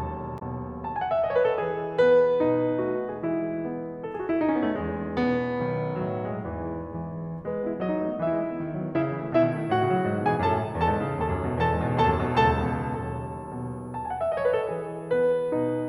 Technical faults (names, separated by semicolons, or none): damaged data in a compressed stream; switching supply whistle